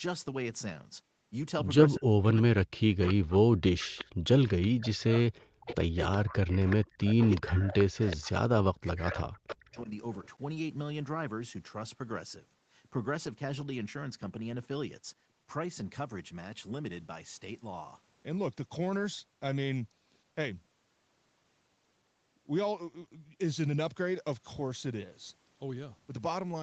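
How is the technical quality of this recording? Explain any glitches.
The recording has two problems in the first ten seconds, both typical of a speakerphone call where both sides talk at once.

Speech suppressed in double talk, 1.97 to 6.8 s and 7.4 to 9.93 s: the voice dips by up to about 40 dB and breaks up. This is likely an echo canceller muting it during overlap. Unlike a network dropout, the gaps follow the overlap.

Echo leak at 3.02 to 3.14 s, 3.79 to 4.05 s, 4.62 to 5.04 s, 5.6 to 8.31 s and 9.0 to 9.56 s: a faint copy of the voice trails it by 374 ms, mostly about 15 dB down and about 25 dB down in the third stretch. This is likely loudspeaker pickup that was not fully cancelled. Unlike room reverb, it is a distinct, delayed repeat.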